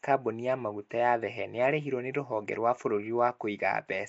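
Speech runs the whole way through with a rough, hissy halo and a smeared, underwater quality, and nothing above 7.7 kHz. The likely cause is Nellymoser compression: coarse fixed-rate block coding that leaves weak bands noise-filled, fitting roughly 32 kbps.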